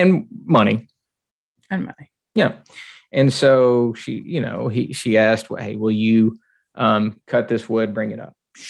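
Speech recording with no technical faults to report.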